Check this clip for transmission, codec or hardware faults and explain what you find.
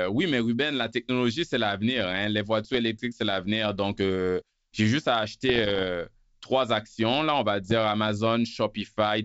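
Three bursts of bit errors on an ADPCM link, the first and last very short. At 2.63–2.76 s (after "c'est l'avenir hein les"), 5.49–5.84 s (after "euh j'ai juste à") and 7.63–7.73 s (after "actions là on va"), pops and rough, crackly bursts with brief level jumps cut through the speech. The cause is a few flipped bits, a fraction of a percent, in a G.722-style wideband stream at 64 kbit/s. Each flipped bit corrupts the decoder's step size and predictor, so the damage rings on for milliseconds.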